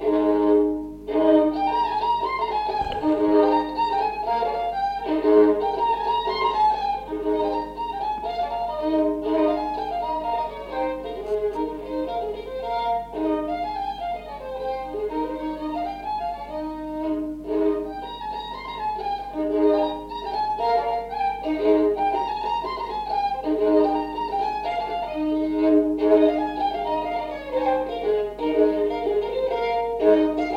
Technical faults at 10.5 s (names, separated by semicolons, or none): none